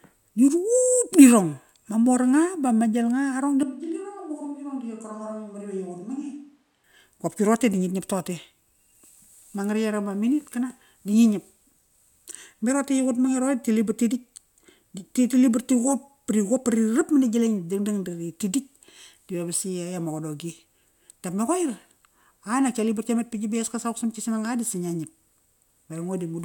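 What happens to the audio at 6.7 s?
At 6.7 s the speech is still in a switch to a distant microphone, running from 3.63 to 6.84 s. The close microphone's signal likely dropped out, so a farther pickup takes over. The speech turns suddenly roomy and hollow, with less bass, about 10 dB quieter, and has more audible background noise.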